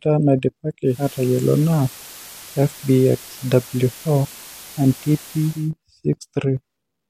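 Speech, with digital radio blending to analogue from 0.83 to 5.72 s. The receiver loses its digital signal and cross-fades over 270 ms to the FM broadcast. Hiss rises to around 20 dB below the speech. Level shifts about 1 dB.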